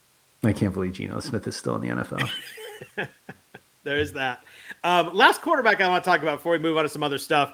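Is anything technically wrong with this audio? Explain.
No, nothing technically wrong can be heard in this speech recording.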